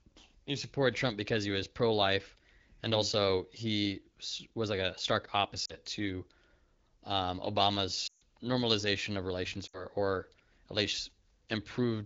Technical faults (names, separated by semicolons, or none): lost AMR speech frames